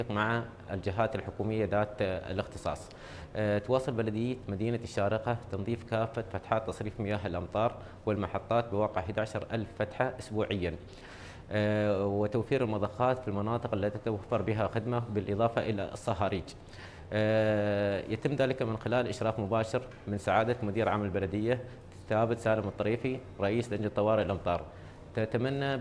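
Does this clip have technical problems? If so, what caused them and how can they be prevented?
No, this clip has no technical problems, so there is nothing to trace to a cause or prevent.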